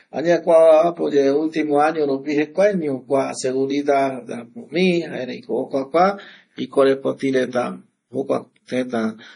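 From start to finish, the speech carries heavy coding damage, likely from MP3 compression. Nothing is heard above 10.6 kHz. The treble stops at that fixed point. Too few bits were available, which fits a rate near 32 kbps. The encoder dropped weak frequency lines, and they switch on and off between frames. The speech sounds watery and swirly. S sounds turn metallic and chirpy. Attacks come across smeared.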